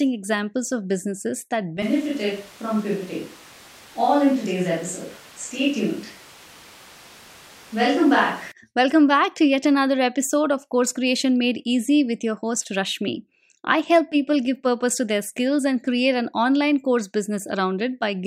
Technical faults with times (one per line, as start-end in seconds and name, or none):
1.82-8.52 switch to a distant microphone